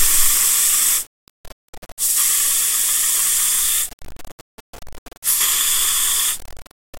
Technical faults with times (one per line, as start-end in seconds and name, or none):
0.00-7.00 low bit depth without dither